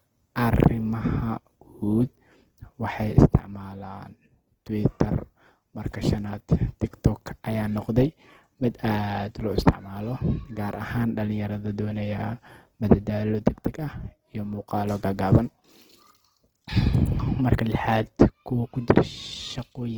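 Throughout the speech, the audio has likely been through Opus compression in its music (CELT) mode, with a bit budget so small that it fits a rate around 16 kbps. Short of bits, the encoder keeps each band's overall energy but fills in the detail by copying lower bands upward or by inserting noise. The damage is plainly audible: the speech sounds rough, grainy and noisy rather than swirly. The bandwidth stays full, with nothing above 20.2 kHz.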